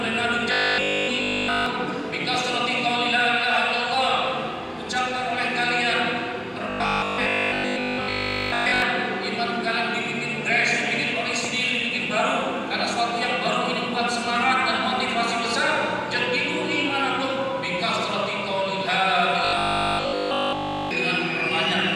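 From 0.52 to 1.66 s, 6.70 to 8.82 s and 19.45 to 20.91 s, a rigid 50 Hz buzz replaces the sound almost entirely. This is robotic sound from repeated short buffers, likely caused by a 20 ms chunk being looped. Unlike steady mains hum, it follows the sound's rough contour.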